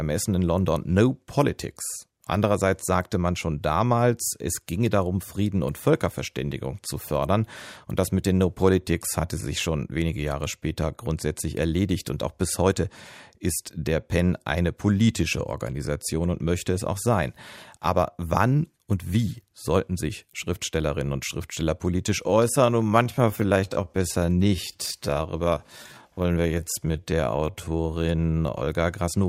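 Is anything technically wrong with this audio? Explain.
Yes. From 22.20 to 28.66 s the speech abruptly slows to about 0.67 times its pace at unchanged pitch, sounding dragged: a time-stretched section, likely stretched by repeating short pieces.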